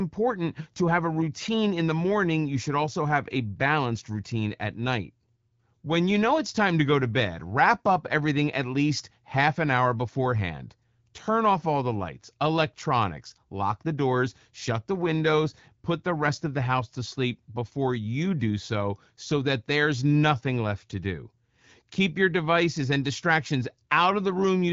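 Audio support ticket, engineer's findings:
No faults found: the speech signal runs through the AMR wideband (HD Voice) codec at 12.65 kbit/s, with only the light coding damage expected at that rate.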